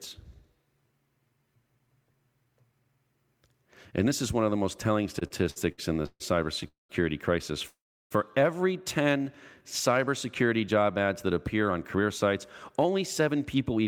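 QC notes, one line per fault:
5.19–6.66 s, repeated stalls (stutter): right after "of the most telling" the audio halts eleven times, the longest hold 138 ms, with 364 ms of stretched-out sound making up about a quarter of the span. Packets kept arriving late, so the jitter buffer repeatedly ran dry and the receiver extended the last sound each time. Nothing is lost, but delivery drags and judders.
6.68–6.91 s and 7.68–8.13 s, call audio freeze: the audio stops and the last sound is held as a fading buzz, then drops to silence, for 216 ms and 428 ms in turn, with 150 ms and 340 ms of that silent. The likely cause is packets held up in transit emptying the jitter buffer. Playback then resumes where it stopped, adding a gap without losing material.
9.03–9.25 s, jitter buffer slow-down: just before "cybersecurity job ads that" the sound plays at 87% speed at unchanged pitch, stretched by 36 ms. 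The buffer was rebuilding its reserve by repeating single pitch periods, which draws sounds out.
11.54–13.86 s, jitter buffer speed-up: after "cybersecurity job ads that" the sound runs at 106% speed with pitch unchanged, roughly 150 ms shorter in total. The buffer held more audio than it needed and trimmed short pitch-period pieces to cut the delay, giving a slightly hurried delivery.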